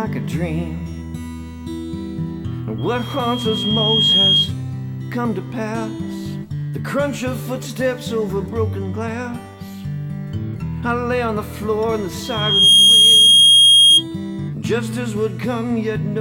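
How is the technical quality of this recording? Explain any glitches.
Two loudspeaker feedback squeals spoil it. From 2.78 to 4.53 s and from 12.23 to 14.04 s, a 3.2 kHz tone swells, as the microphone re-amplifies its own loudspeaker, to around 10 dB and then around 15 dB above the sound. The first builds over a second or so, the second within about half a second. On a spectrogram each shows as a bright horizontal line at 3.2 kHz. The waveform swells into a dense envelope.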